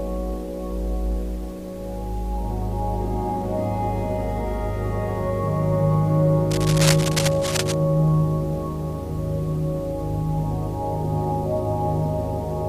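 From 6.51 to 7.74 s there is cable scratch noise, a dense, uneven rustling only slightly below the sound's level, likely from a worn connector being moved.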